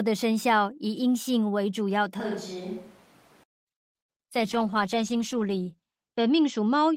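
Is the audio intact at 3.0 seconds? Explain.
No. From 2.2 to 3.43 s the audio shows a switch to a distant microphone, likely because the close microphone's feed dropped out and a more remote pickup took over. The speech abruptly turns roomy and hollow, loses low-frequency body, and falls by about 5 dB, while room noise rises to roughly 20 dB below the speech. At 3.43 s the close, fuller sound returns just as suddenly.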